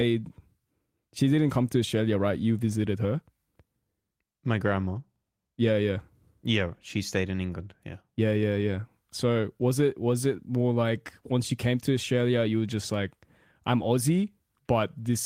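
Nothing technically wrong turns up anywhere in this speech recording, so there are no problem spots to point out and no causes to track down.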